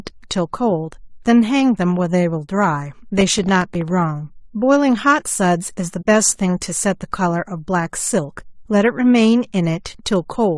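Low-delay AAC compression runs through the whole speech clip: the voice sounds rough and grainy, with noise filling the gaps between harmonics and a thin, synthetic-sounding top band. This points to the short-frame AAC-ELD codec used for calls, likely at a low bitrate of around 32 kbps.

Processor overload crackle appears from 3.18 to 3.91 s. Buffers of a few milliseconds missed their deadlines about twenty times over that stretch, and each miss dropped in a tiny patch of silence with hard edges. Together these gaps give a gritty tearing over the speech that stops once the load clears.

AAC frame loss with muting follows from 6.01 to 6.06 s. About 40 ms of audio was zeroed by the decoder, which fits two lost frames, and the overlapping windows fade it out and back in. The result is a soft-edged gap.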